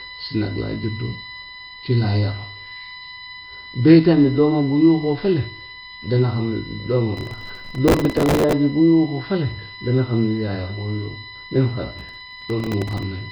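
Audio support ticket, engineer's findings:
USB whine: bus power/ground leaking 1 ms frame current into the audio path. Steady 1 kHz whine with harmonics, strongest at 12 kHz, roughly 15 dB below the speech, present throughout.

Nellymoser compression: likely a Nellymoser Asao encode, consistent with a rate near 22 kbps. Heavy codec damage: nothing above 5.3 kHz, rough hissy halo, smeared underwater speech throughout.

Processor overload crackle: CPU repeatedly missing small-buffer deadlines, replaying old audio each time. Gritty crackle over 7.17–8.53 s and 11.93–13.03 s, pointing to roughly 100 and 40 missed buffers of about 3 ms.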